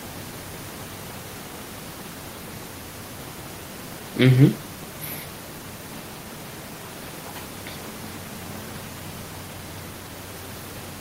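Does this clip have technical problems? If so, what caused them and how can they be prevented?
No, there are no technical faults here.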